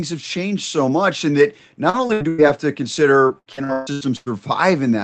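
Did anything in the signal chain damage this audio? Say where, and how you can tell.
Yes, at the network stage: repeated packet loss (robotic sound) hits twice. From 1.89 to 2.40 s, after "so much in that" and before "have to", four gaps are filled by extending the preceding sound, covering nearly half the span, the longest lasting 97 ms. From 3.28 to 4.28 s, after "have to", seven gaps cover about half, the longest 140 ms. During the losses, the jitter buffer keeps re-synthesising the last frames, so the sound turns choppy with pieces missing. On a spectrogram, those stretches show smeared, repeated harmonic bands with abrupt vertical edges where real audio resumes. The waveform shows looped, evenly repeating segments, all under the 8 kHz ceiling from the Opus call path.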